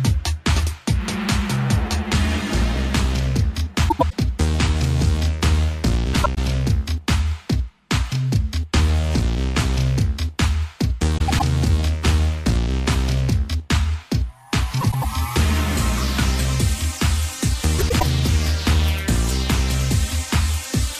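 Frames out of order occur at 3.89, 6.13, 11.18, 14.81 and 17.78 s. Each time, a span of about 0.25 s of the audio plays with its two halves swapped, each half lasting about 104.5 ms, which fits two adjacent blocks of four frames being delivered and decoded in reversed order. The result is a brief garbled flutter. No time is lost, so the surrounding audio stays in place.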